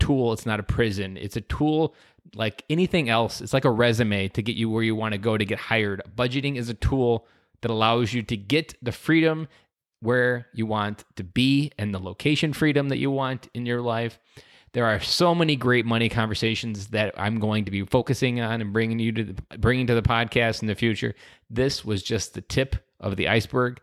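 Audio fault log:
No faults detected anywhere in the speech recording.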